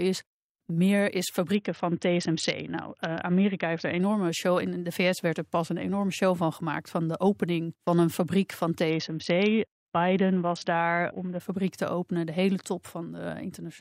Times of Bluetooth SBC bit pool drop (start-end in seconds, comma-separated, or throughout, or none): 1.55-4.00, 8.90-11.40